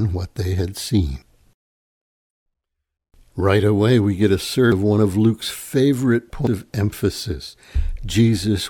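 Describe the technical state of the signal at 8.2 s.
At 8.2 s the speech signal is intact, with no dropout, clipping, glitch or other fault to be heard at that point.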